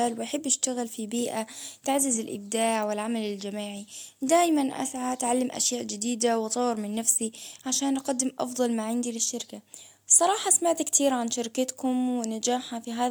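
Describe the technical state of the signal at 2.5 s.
At 2.5 s the speech signal is intact, with no audible technical fault.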